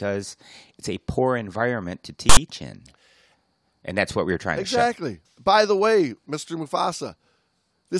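Speech, with a file tags played as audio fault from 2.29 to 2.37 s: a 75 ms block of text metadata decoded as samples gives a loud, one-sided rasp with hard edges, distinct from a click's single tick or the even, full-scale hiss of compressed data.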